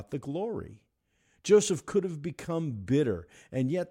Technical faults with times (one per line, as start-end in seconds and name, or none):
none